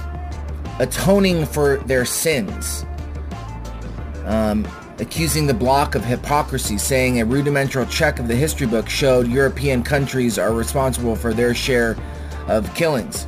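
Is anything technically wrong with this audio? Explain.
Yes. From 2.62 to 3.41 s there are CD scratch ticks: five tiny clicks, the longest about a millisecond, where a scratch beat the disc's error correction on each turn.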